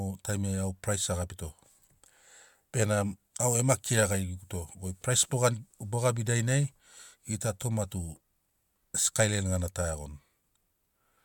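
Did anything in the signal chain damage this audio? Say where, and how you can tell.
No, nothing in the signal chain damaged this audio.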